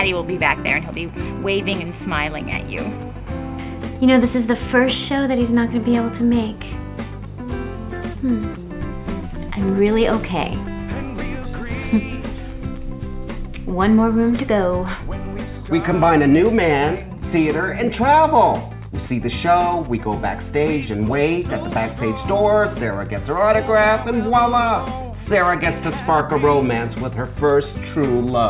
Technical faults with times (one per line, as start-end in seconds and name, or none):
none